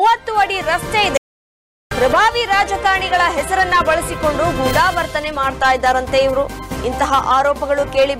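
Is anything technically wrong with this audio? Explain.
Yes. From 1.17 to 1.91 s there is an audio dropout to silence. The input feed was likely interrupted, through a disconnected device, a failed link or an accidental mute, while the recording chain kept writing silence. The sound cuts off abruptly and returns just as abruptly, leaving about 0.74 s of silence with no background noise underneath. Whatever sound occurred in that stretch is missing from the clip.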